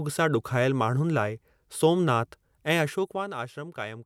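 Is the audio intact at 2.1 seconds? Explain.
Yes, the speech at 2.1 seconds plays through intact, with no dropout, distortion or sudden jump in level at that point.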